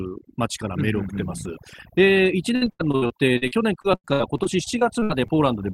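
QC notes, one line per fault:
Throughout: overdone noise removal; bands near the noise estimate are pulled down, leaving twinkling, warbling background specks and thinned quiet speech, constant rather than bursty.
2.55–5.31 s: repeated packet loss (robotic sound); a rapid run of holes, longest 90 ms, patched by extending the last sound over about a quarter of the stretch, choppy with pieces missing, confined to this span.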